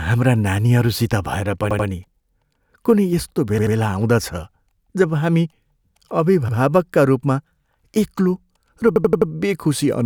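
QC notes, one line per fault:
1.71 to 9.30 s, repeated buffer: four stutters, at 1.71 to 1.88 s, 3.58 to 3.76 s, 6.49 to 6.57 s and 8.96 to 9.30 s. Each time the same 85 ms chunk plays over again, twice extra at the first two, once at the third and four times at the last, which fits a 4096-sample buffer. Fresh audio wasn't ready, so the device looped what it had, with a hard splice at every repeat. Nothing seems to be skipped; the speech just gets delayed.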